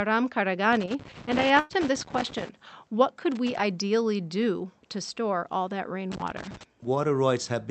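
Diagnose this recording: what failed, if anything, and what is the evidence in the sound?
A burst of packet loss on the network leg of the call failed between 1.59 and 1.71 s. Roughly 100 ms of speech never arrived in time. The receiver's concealment extended the last received sound across the gap, turning it down steadily, then resumed later in the utterance with that stretch missing. On a spectrogram, the frozen, smeared last sound fades out and then jumps to new content. The waveform shows a decaying repetitive stretch ending abruptly, all under the call codec's 8 kHz ceiling.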